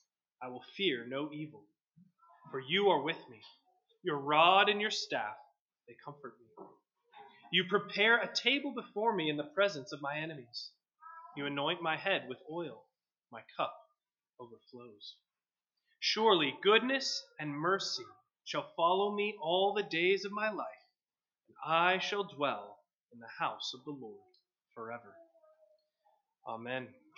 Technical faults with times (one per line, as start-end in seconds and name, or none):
none